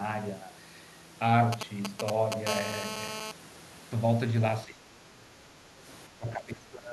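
GSM signalling bursts run from 1.53 to 2.47 s. A 2G handset close to the recording chain sends short clusters of radio bursts while it negotiates with the network, and the audio circuitry rectifies those pulses into sound. What comes through is a galloping dit-dit-dit of brief 217 Hz buzzes. They sit only a few decibels under the speech, so the pattern is plainly audible against it.

GSM phone buzz follows directly from 2.47 to 3.32 s, as the handset moves into an active call and transmits in bursts 217 times a second. The rectified bursts now form an unbroken, hard, raspy buzz at 217 Hz, rich in harmonics and bearing no relation to the speech. It runs at about 8 dB below the speech.

Speech suppressed in double talk appears from 4.66 to 5.85 s and again from 6.08 s to the end at 6.93 s. The speech sinks sharply, by as much as around 25 dB at its deepest, over roughly a second in the first stretch and under a second in the second. 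The likely cause is an echo canceller that could not tell the near talker from loudspeaker echo while both sides spoke, and so attenuated both.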